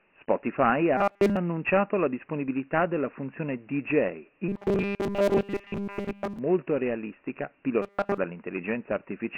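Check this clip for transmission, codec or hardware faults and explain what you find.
Two faults are present in this speech clip: a low-rate telephony codec across the whole recording, and three stretches of robotic buzzing from repeated buffers.

Dialogic VOX ADPCM runs for the full clip. The 4-bit adaptive coding, consistent with 24 kbps at 6,000 samples per second, leaves nothing above 3 kHz and adds heavy granular hiss that tracks the speech, giving a dull, gritty, band-limited sound.

Robotic sound from repeated short buffers occurs at 0.97–1.37 s (ending just before "annunciato la disponibilità della"), 4.49–6.39 s, and 7.82–8.18 s. The likely cause is a playback device starved of new data, replaying the last 5 ms of audio to fill the gap. The resulting fixed 200 Hz metallic buzz replaces nearly all of the real signal in the first and last stretches and most of it in the middle one.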